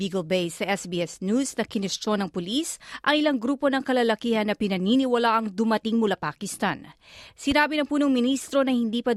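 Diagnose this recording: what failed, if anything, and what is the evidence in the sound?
Loud pop, 7.51–7.54 s, before "ng punong": likely an analogue-wiring voltage step, a few dB over the speech; a thin broadband spectrogram stripe, one waveform spike.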